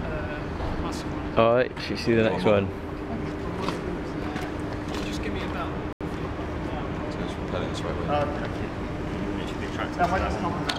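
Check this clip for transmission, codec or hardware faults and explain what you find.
There's one fault here, a Bluetooth stall. At 5.93 s the audio drops out to dead silence for about 80 ms, then comes back in at 6.01 s. The likely cause is radio interference holding up packets on the wireless link, so the headphones' receive buffer ran empty and playback simply stopped until the delayed packets turned up. It sounds like a brief, clean hole in the sound rather than a crackle or a glitchy burst.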